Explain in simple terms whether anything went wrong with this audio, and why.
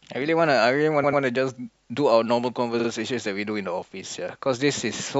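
The speech stutters twice. From 1.02 to 1.21 s, a 93 ms snippet plays two extra times, and from 2.79 to 2.88 s, a 46 ms snippet does the same. These are repeated frames: compressed chunks were stored or sent more than once, so the player replays them.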